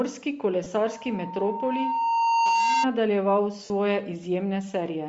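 Across the whole speech clip the upper spectrum sounds thin and grainy, with a breathy, noise-like edge on the voice. This is likely Bluetooth LC3 compression at a low rate, consistent with roughly 32 kbps. The LE Audio codec zeroes much of the high band and refills it with noise. Band-limiting alone would sound dull but clean, so the hiss-textured fill is what gives it away.

From 0.64 to 0.66 s there is a brief smeared, noisy blur lasting 20 ms. This is lost LE Audio frames, matching two 10 ms frames. The decoder repeats the last spectrum with randomised signs, so the sound turns to noisy mush instead of cutting cleanly to silence as a plain dropout would.

From 0.83 to 2.88 s a single steady tone at 919 Hz rises out of the speech. It swells over about a second and a half and ends up around 5 dB louder than the voice. This is loudspeaker feedback squeal. The microphone hears its own loudspeaker, and at that one frequency the loop gain passes unity, so the tone feeds itself. 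A hum would sit at the mains frequency from the start, whereas this tone grows by itself.

At 3.65 to 3.70 s a second loss of LE Audio frames runs for 50 ms, fitting five frames. It sounds longer than the first, and the concealed sound begins to fade toward the end of the gap.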